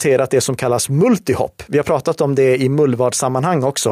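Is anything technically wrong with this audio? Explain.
No, nothing technically wrong stands out here; the speech comes across steady and intact all the way, with nothing that needs flagging.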